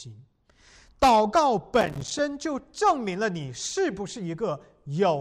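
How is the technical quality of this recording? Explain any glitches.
The recording has one glitch, a processor overload crackle from 1.81 to 2.19 s. The processor fell behind and missed about twenty short buffer deadlines across that stretch, each on the order of 5 ms. Each missed buffer became a hard-edged dropout to silence, so the speech sounds torn and gritty through that stretch and then clears once the load eases.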